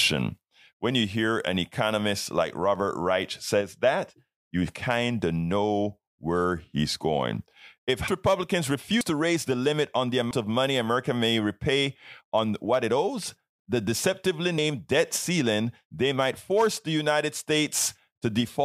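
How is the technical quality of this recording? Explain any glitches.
The speech has four audible glitches. At 8.08, 9.01, 10.31 and 14.58 s there is an abrupt forward jump, with no gap. About a third of a second is lost at 8.08 s and a tenth or two at the others. The likely cause is a dropped buffer (overrun), where incoming audio was overwritten before the program collected it.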